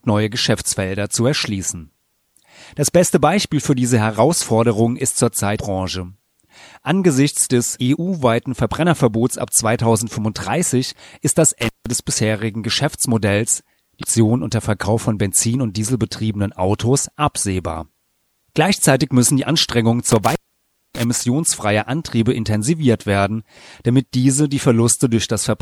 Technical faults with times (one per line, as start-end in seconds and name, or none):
5.55-5.59 damaged data in a compressed stream
11.61-11.92 intermittent contact
13.99-14.04 damaged data in a compressed stream
20.09-21.21 intermittent contact